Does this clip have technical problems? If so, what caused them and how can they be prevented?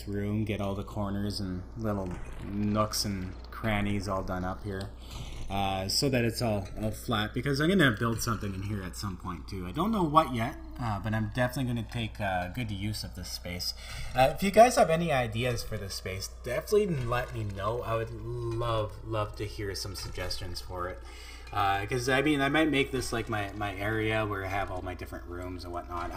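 Yes. Throughout the clip a slow flanging sweep drifts through the sound, produced when the channels were summed to mono. This is channels drifting apart: each side ran on its own clock, off by roughly 150 ppm, so their offset crept to about 3 ms and the comb notches slid across the spectrum. Recording both channels on one interface, or locking the devices to a shared word clock, prevents it.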